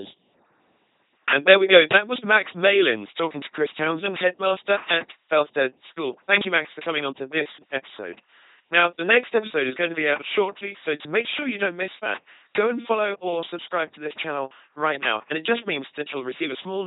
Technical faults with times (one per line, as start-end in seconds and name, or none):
0.00-16.86 LPC-10 vocoder